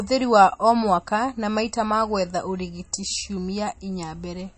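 Throughout the speech, nothing sounds above 8.4 kHz. The top is cut off flat. The sound is watery and swirly, with metallic chirps on s sounds and smeared attacks. The likely cause is MP3 compression, which fits a low bitrate around 32 kbps.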